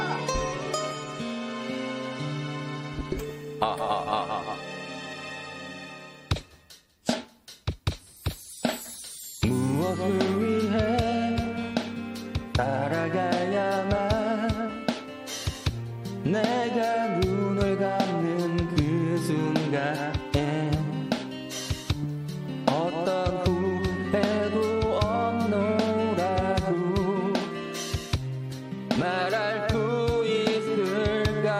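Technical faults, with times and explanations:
Nothing here calls for a timestamp; there are no technical faults to flag anywhere in the clip.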